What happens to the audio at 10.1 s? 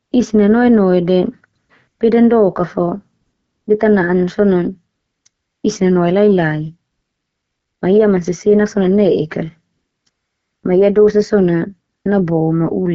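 The phone's voice activity detection judged the talker silent and stopped sending speech frames for 540 ms, so from 10.09 to 10.63 s the receiver plays AMR comfort noise: a smooth, steady synthetic hiss standing in for the real background, just after an earlier gap at 9.73 to 10.05 s.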